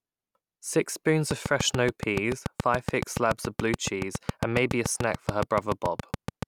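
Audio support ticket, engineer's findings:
Train of clicks, 1.31–6.44 s. Likely interference from nearby equipment or a faulty connection or power supply, injecting regular pulses at 7 per second. Some forty near-identical ticks, peaking roughly 15 dB above the speech, audible over the words and through pauses.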